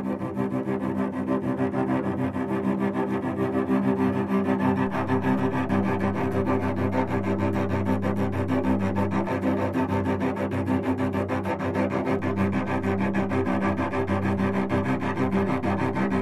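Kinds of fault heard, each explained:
DC step: The zero line of the waveform suddenly shifts off centre and holds there. Here it jumps at 4.87 s, with an offset of about -37 dBFS, and steps back at 9.28 s. A second jump, of about -39 dBFS, comes at 12.19 s and holds to the end. Each jump and return is heard as a low thump or click. The sound itself carries on unchanged through both offsets.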